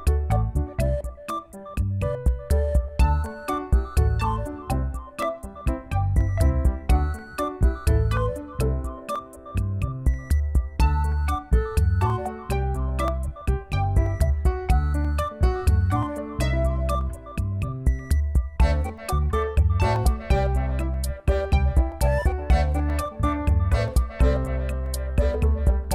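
From 0.32 to 25.85 s, a click recurs every 0.98 s, about thirty times. These are likely clock drift buffer slips, with two clocks roughly 400 ppm apart.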